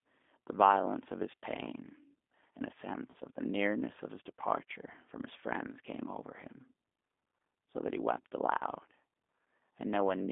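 A speech recording carried over a narrowband G.729 codec link throughout. Everything is squeezed into roughly 250 Hz to 3.6 kHz, and the voice has the slightly rough, synthetic edge of a low-rate model that rebuilds speech from a vocal-tract filter and a few pulses per frame, which fits 8 kbit/s. On a spectrogram, the energy stops sharply near 3.6 kHz with nothing above it, the lowest band is thin, and harmonics look smeared rather than cleanly striated. Two brief dropouts show VoIP packet loss concealed by the speech codec, from 3.11 to 3.16 s and from 8.58 to 8.64 s. Each covers about 30 ms of missing audio, which points to a single lost packet. Instead of silence, the decoder carried on from its last pitch and filter settings while lowering the gain, so each gap is stretched into a short fading sound. On the waveform this appears as a brief stretch of overly regular, shrinking cycles. 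On a spectrogram the harmonics run flat and then dim where the formants should be moving.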